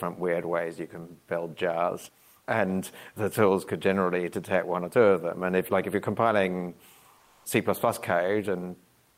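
From 7.21 to 7.45 s, just after "like if you're compiling", comfort noise in place of the background replaces the room noise, about 41 dB below the speech, for 240 ms at an unchanged level. Opus discontinuous transmission is the likely cause. On a spectrogram the patch looks smoother and more uniform than the real background.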